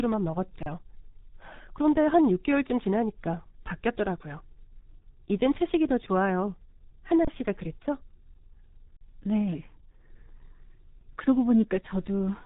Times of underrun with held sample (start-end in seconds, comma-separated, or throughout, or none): 0.63-0.66, 7.25-7.27, 8.97-9.01